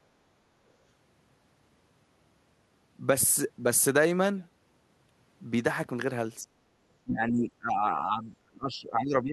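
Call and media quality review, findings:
Speech suppressed in double talk, likely echo canceller unable to separate near-end speech from loudspeaker echo while both sides spoke, so it attenuated both. Speech dips about 30 dB at 6.44–6.62 s, then is suppressed again, up to about 25 dB down, over about 2.0 s from 7.04 s to the end.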